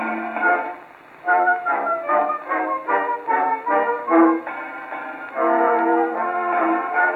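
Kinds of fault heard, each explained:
Nothing in this music clip gives a listener anything to flag, so there's no fault to explain here.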